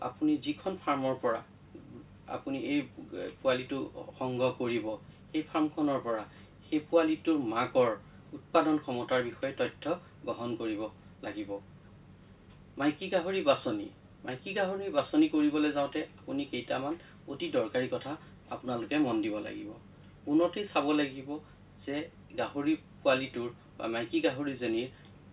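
No technical faults can be heard in this audio, so there are none to describe in time order.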